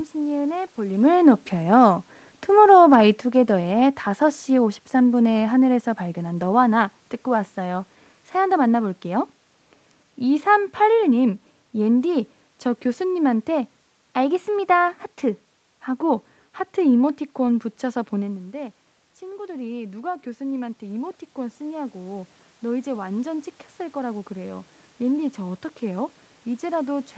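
From 0.92 to 6.88 s, automatic gain falling: the gain control judged the input too loud, apparently after the talker came closer around 1 s, and eased its gain down by about 7 dB. The speech starts loud, then sinks gradually along with the room noise behind it.

From 18.22 to 27.01 s, automatic gain rising: the talker moves away around 18 s, dropping the input by about 12 dB, and the control slowly lifts its gain by about 9 dB. Speech and background swell together over several seconds, never fully regaining their earlier level.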